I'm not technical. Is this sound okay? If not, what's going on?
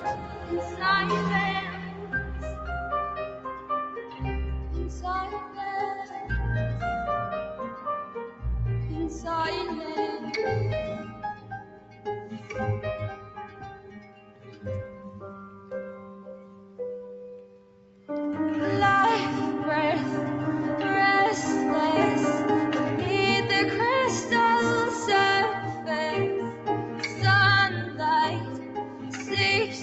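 No. The sound keeps swelling and sinking in loudness, with steady, lingering parts fading down while sudden, sharp parts come through more fully, so it pumps and sounds thinned out. This is a noise suppressor applied to music or sounds: a tool built to clean up speech on calls was left switched on, and it mistakes held tones, room ambience and echo tails for background noise and keeps pulling them down.

The worst of this, sound cut by the noise suppressor, happens from 0 to 4.2 seconds, 5.46 to 6.14 seconds, 8.06 to 8.42 seconds, 11.06 to 18.09 seconds, and 25.74 seconds to the end. In these stretches the suppressor pushes parts of the sound noticeably quieter than the rest, so steady or fading sounds shrink and their endings are clipped short, while quick, abrupt sounds mostly survive.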